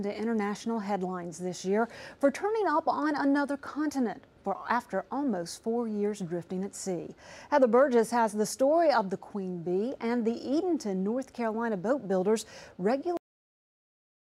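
At 13.17 s the audio just stops dead, a classic cut-off end. Whatever was sounding gets chopped mid-flight, with no tail or natural decay, and everything after that is flat digital silence for the last second or so. What's happened is that the final stretch of buffers never got written out, so the recording ends while the sound is still going rather than letting it finish.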